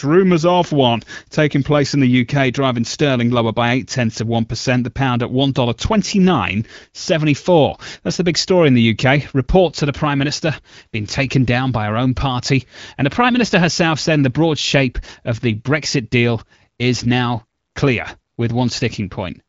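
Listening through this speech recording, nothing stood out as a technical problem.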